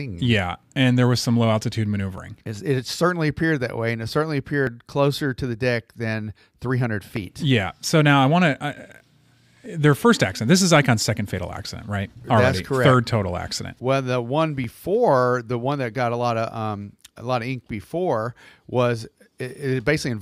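Speech, with brief skips at 2.18, 4.67, 7.16, 9.66, 14.64, 17.14 and 19.63 s. Each drops a few milliseconds and is spliced without silence, likely audio missing between chunks at 2.5 s boundaries.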